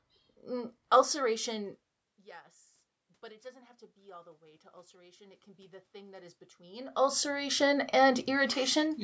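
Automatic gain rising from 3.0 to 8.21 s: after the input fell by about 24 dB, the gain control slowly added about 10 dB, so speech and room noise swell together.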